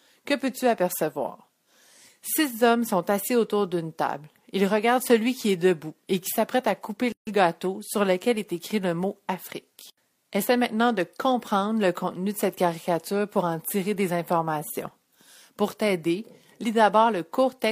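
At 7.12 s the sound drops out for about 147 ms, resuming at 7.27 s: a gap at a join of encoded pieces. The separately encoded segments were spliced with their start-up delay and end padding left untrimmed, leaving a hole with smeared edges.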